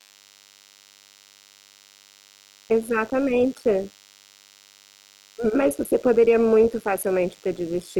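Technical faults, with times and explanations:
Throughout, DECT cordless phone buzz: a thin, steady buzz at 100 Hz with a stack of harmonics sits roughly 35 dB under the speech. A nearby DECT handset or base fires a radio burst every 10 ms, and the audio circuitry rectifies it into sound.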